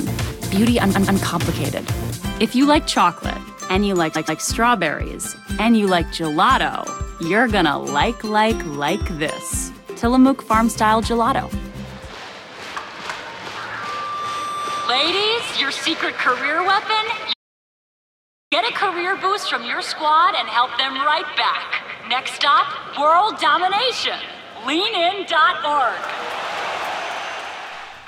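The audio stutters five times from repeated frames, at 0.94–1.20 s, 4.15–4.40 s, 9.03–9.06 s, 12.34–12.40 s and 18.76 s. Each time a short block of compressed audio, 128 ms in the first two, plays again, lengthening the clip by up to 256 ms. Between 17.33 and 18.52 s the sound cuts to silence with no room tone. This is an audio dropout to silence lasting about 1.2 s, most likely from the input signal being lost while the recorder kept writing silence.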